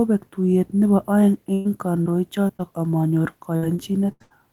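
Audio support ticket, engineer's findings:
Burst of packet loss, 1.53–1.67 s: consecutive packets lost or late, about 120 ms of speech never decoded. Receiver concealment extends the last sound and fades it across the hole, giving a held, decaying buzz or hiss before speech resumes further along.

Short concealed packet loss, 2.03–2.08 s, 2.48–2.51 s, 2.57–2.61 s: brief jitter-buffer or network misses of roughly 40, 20 and 20 ms. Decoder patches each hole from the preceding pitch or noise and cross-fades back, heard as quick smears or wobbles that can swallow a consonant.

Repeated packet loss (robotic sound), 3.57–4.32 s: four gaps in quick succession, longest 83 ms, about 240 ms of speech lost and roughly a third of the stretch synthesised. Concealment restarts before recovering, so speech turns choppy, with pieces missing.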